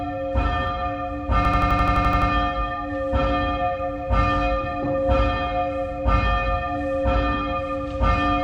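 At 1.45 s the audio locks into a system hang loop until about 2.30 s: the same 85 ms slice repeats exactly, ten times, giving a machine-gun stutter at roughly 11.7 Hz. That's the computer or driver freezing while the sound hardware keeps replaying its ring buffer, and the slice length fits a 4096-sample buffer. Once it recovers, playback resumes where it stalled, with little or nothing dropped.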